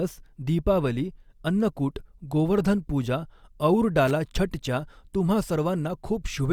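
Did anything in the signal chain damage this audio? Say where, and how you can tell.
Yes. The damage is in the analogue wiring, as loose connector crackle. A short burst of irregular crackle interrupts the speech from 4.07 to 4.11 s, just before "छठच्या तुम्हा". It lasts about 35 ms. It has a rough, scratchy texture rather than a clean click or a steady tone. That points to a worn or dirty contact. The contact made and broke several times as it shifted, chopping the signal.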